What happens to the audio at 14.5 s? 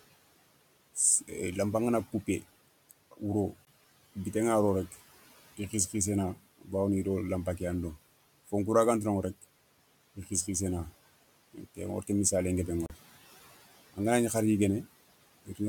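Nothing goes wrong at 14.5 s; the speech carries on intact, with only the room's own background noise sitting about 21 dB below it.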